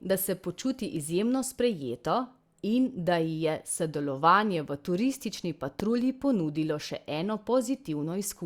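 At 5.80 to 5.82 s a single loud pop, roughly 15 dB above the speech, cuts in as a sharp thump. It is likely a voltage pulse from a plug, switch or static discharge. The speech carries on underneath, which sets it apart from a dropout.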